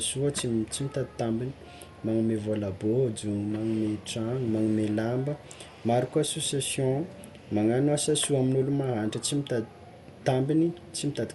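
Throughout the speech, the sound is dull, with nothing above 11.5 kHz and a rough, fluttering noise around tones. This is likely Dolby Digital compression at a starved bitrate, which fits roughly 64 kbps. Unfunded frequency lines get refilled with noise.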